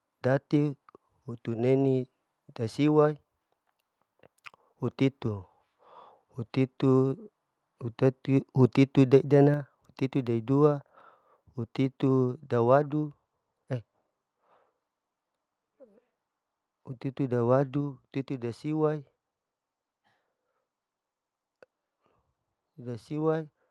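A microphone volume step-down at 9.54 s makes this speech clip, carried over an Opus call path with content reaching up to about 12 kHz, suddenly drop by about 4 dB, with voice and background falling together. The likely cause is call software lowering the device's input volume in one step after judging the signal too loud.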